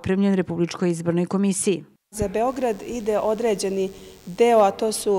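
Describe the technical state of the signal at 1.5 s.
At 1.5 s the signal is intact, with no dropout, distortion, glitch or other transmission fault audible at that point.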